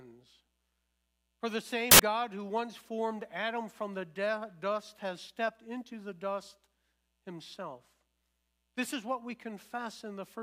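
A burst of loud, harsh broadband noise fills 1.91 to 1.99 s: samples built from the wrong bytes, misordered or misaligned, so noisy low bits dominate each value.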